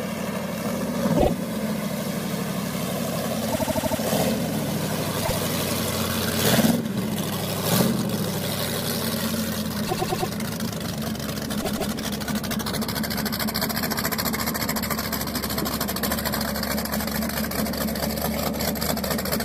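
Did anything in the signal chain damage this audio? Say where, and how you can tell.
Yes, repeated frames at the codec or storage stage: stutters at 1.16, 3.52, 5.24, 9.86 and 11.61 s, where blocks of 52 to 157 ms replay.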